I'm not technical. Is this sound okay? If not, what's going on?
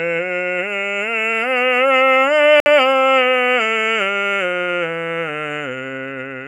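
No, there's one glitch. At 2.60 s the music drops out to silence for about 60 ms, then carries on at 2.66 s. That's likely a Bluetooth stall: wireless interference held up the audio, so the headphones briefly ran out of sound to play.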